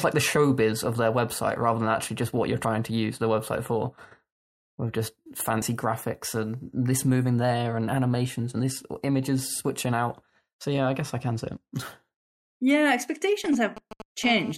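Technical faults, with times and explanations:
2.65, 5.62, 8.60 and 11.57 s, audio missing between chunks: the speech skips forward abruptly at a steady 3 s spacing, such as between "actually just what you're" and "to use the website", and between "moving there and animations" and "this images switching out". The likely cause is a recorder working in 3 s chunks and dropping a few tens of milliseconds at each handover, then butting the two edges together.
13.44 to 14.26 s, GSM signalling bursts: a galloping dit-dit-dit of ticks and brief raspy buzzes sits roughly 10 dB below the speech. A nearby 2G phone is sending only short groups of radio bursts while it negotiates with the network, and the audio circuit rectifies each group into sound.
14.26 to 14.52 s, GSM phone buzz: the ticking turns into a continuous hard, harmonically rich buzz at 217 Hz, about 14 dB below the speech. The phone is now transmitting steadily, as in a call, and its 217-per-second radio pulses are demodulated by the audio circuit.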